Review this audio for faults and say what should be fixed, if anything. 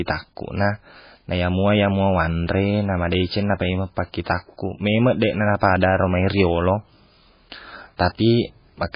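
Heavy MP3 compression damage runs through the whole speech clip. Nothing is present above about 5.1 kHz, where the encoder has cut the treble, so sibilants are dull and clipped. Weak frequency lines drop in and out between frames, giving a watery, swirly texture to the voice, and consonant onsets are smeared. The damage points to a very low bitrate, around 16 kbps, as the likely cause. To prevent it, encode from the original source at a higher bitrate, or keep a lossless copy for delivery.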